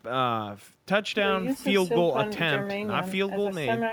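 Speech recording with no audible technical faults anywhere in the clip.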